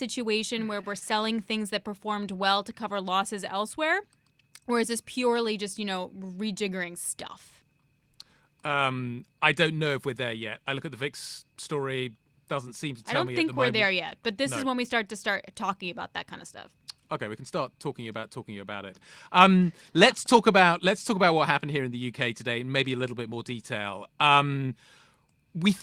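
At 0.81 to 0.85 s a packet arrived late, so the jitter buffer ran dry and the receiver held the last sound for about 16 ms before resuming from the same point. This short stall from a late packet loses nothing, but the speech drags slightly.

From 0.99 to 1.03 s about 20 ms of audio never reached the decoder, and the receiver filled a 22 ms gap by extending the preceding sound. This short concealed packet loss is heard as a brief smear or wobble before the speech blends back in.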